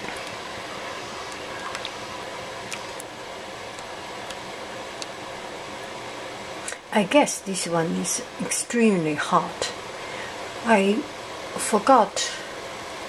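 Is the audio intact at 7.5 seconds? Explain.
No, at 7.5 seconds you've still got timecode bleed, which runs the whole clip. Linear timecode at 30 frames per second is leaking in from a neighbouring line, its square wave flipping between roughly 1 and 2 kHz, giving a steady chirpy warble about 35 dB under the sound.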